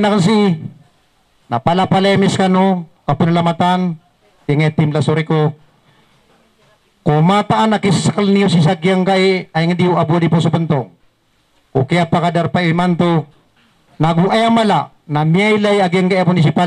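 No technical faults are audible anywhere in the clip.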